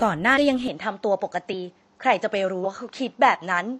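At 0.33 to 0.37 s, compressed frames are skipped. Whole blocks of encoded speech never reach the output, so the sound jumps ahead by roughly a fifth of a second. The jump fits frames of about 46 ms.

At 0.68 s the tone suddenly turns duller and stays that way to the end. Nothing is heard above 7.6 kHz. A faint new noise floor appears, about 45 dB below the speech. The level stays about the same, and there is no gap at the change. The likely cause is the input switching to a poorer device with a narrower band and its own background noise.

At 1.49 to 1.54 s, frames are skipped again. This is the longest jump, roughly 300 ms of speech lost.

At 2.60 to 2.66 s, a third frame skip drops roughly 200 ms.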